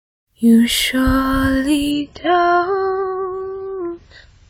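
At 1.91 s the adaptive stream drops to a lower bitrate until the end, cutting everything above 7.6 kHz. The sound turns dull and smeary, which suggests a fall to roughly 16 kbit/s.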